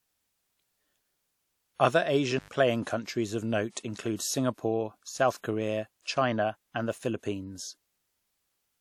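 At 2.38 s, just before "playing countries of note", the speech suffers an intermittent contact: a loose cable or plug briefly opens, cutting the signal for about 98 ms until 2.49 s. The break is bounded by crackle as the contact scrapes open and shut, and hiss remains while the line is open. That ragged, noisy edge distinguishes it from a packet-loss or buffer dropout, which gives a clean cut or smoothed concealment rather than scratchy transitions.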